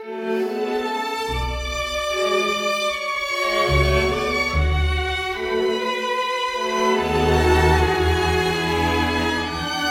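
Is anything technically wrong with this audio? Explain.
No, nothing technically wrong is audible in this music clip.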